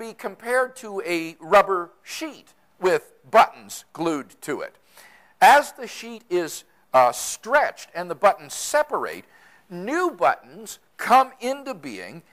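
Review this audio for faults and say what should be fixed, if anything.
At 2.16 s there is an abrupt forward jump in the sound and no gap of silence, with roughly 20 ms missing. This is likely a dropped buffer (overrun), where the capture software failed to read a block before the hardware overwrote it. To prevent it, enlarge the capture buffer or raise the recording thread's priority so samples are collected in time.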